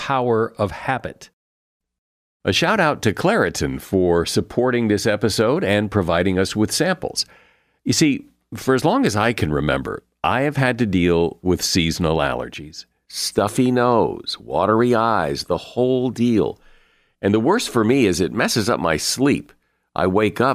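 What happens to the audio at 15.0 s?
Nothing goes wrong at 15.0 s; the speech carries on intact through that moment with no dropout, click or distortion.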